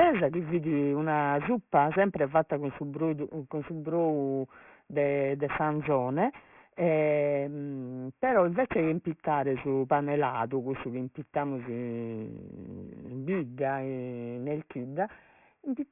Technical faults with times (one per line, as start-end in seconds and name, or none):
0.00-15.91 aliasing